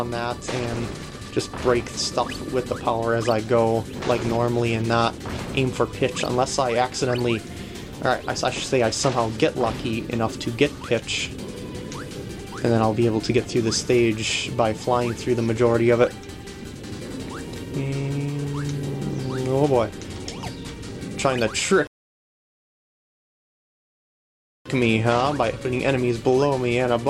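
At 21.87 s the audio drops into silence and picks up again at 24.66 s exactly where it left off, adding about 2.8 s with nothing lost. It is a rebuffering stall: the player exhausted its downloaded audio and waited for more.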